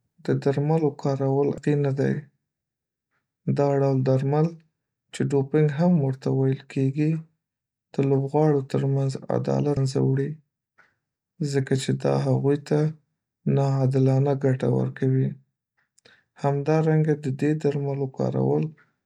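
A speech clip with damaged data in a compressed stream: brief glitches at 1.58 s, after "د درملو کارول", and 9.77 s, after "لوبغاړو تر منځ عدالت". Each glitch comes from the decoder misreading the damaged frames and losing sync.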